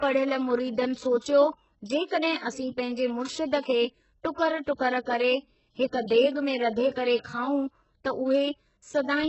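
HE-AAC compression, present throughout the clip: the speech has nothing above 8 kHz, and what remains of the upper range sounds synthetic rather than recorded. The damage is heavy, which fits a very low rate of around 8 kbps. The likely cause is spectral band replication: only the lower spectrum is actually coded, and the treble is rebuilt by copying lower bands upward under a coarse envelope. Because those copied harmonics do not line up with the real ones, s sounds come out gritty, metallic or lispy.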